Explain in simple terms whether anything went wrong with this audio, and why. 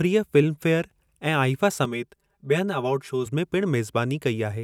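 Something did go wrong, from 1.85 to 3.26 s. The speech turns hollow and phasey there. That is channel delay, heard as comb filtering. One channel arrives about 5 ms late, and the two get mixed together. Shared sound then cancels at evenly spaced pitches, starting near 100 Hz.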